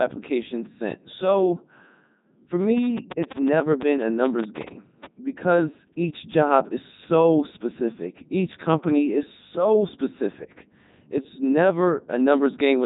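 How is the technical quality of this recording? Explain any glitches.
Quality is poor throughout. The whole clip carries a Codec 2 vocoder sound. Robotic, buzzy speech fits its top 3.2 kbit/s mode. Only pitch, voicing, energy and spectral shape survive. Sine waves rebuild the voice, so the waveform is lost. Nothing remains above 3.8 kHz.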